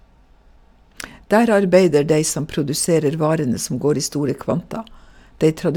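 A speech clip carrying a steady buzz at 100 Hz, present only while sound is playing. This is a resampler restarted on every block: 10 ms blocks converted from 44.1 kHz to 48 kHz, each with an edge error.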